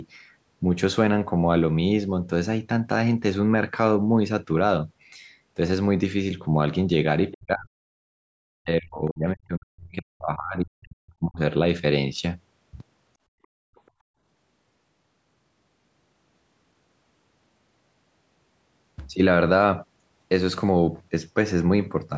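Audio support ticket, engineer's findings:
Speech suppressed in double talk, 7.33–7.74 s and 8.58–11.39 s: talker dips by roughly 40 dB and breaks up over about 2 s of the second span. Likely echo canceller failing to separate near talker from loudspeaker echo during overlap. Waveform shows envelope collapsing in chunks.

Background gated by the echo canceller, 8.02–8.20 s: room tone drops about 37 dB for roughly 0.2 s, then returns. Canceller clamping mic gain while loudspeaker plays. Waveform shows a short near-flat notch in the noise floor; spectrogram shows a vertical blank stripe across the band, which stops at 8 kHz from call mic processing.

Other side's voice leaking through, 13.43–13.47 s and 13.75–13.91 s: faint second voice in brief scraps, roughly 40 dB under the talker. Likely residual loudspeaker echo the canceller left in the mic path. Barely visible on waveform; spectrogram shows faint harmonic traces at those times.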